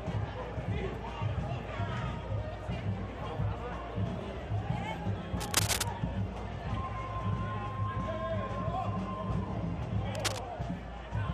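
Cable scratch noise appears at 5.37 s for about half a second, to 5.88 s, and again at 10.14 s for a quarter second, to 10.39 s. Each time, a dense, ragged burst of scratching and rustling sits over the sound at roughly the same loudness as the audio itself. The likely cause is a worn cable, connector or control being moved, its contact resistance fluctuating rapidly and injecting uneven noise into the signal.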